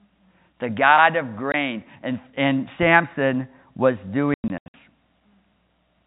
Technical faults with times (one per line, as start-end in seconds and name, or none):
1.52-1.54 packet loss filled with silence
4.34-4.74 packet loss filled with silence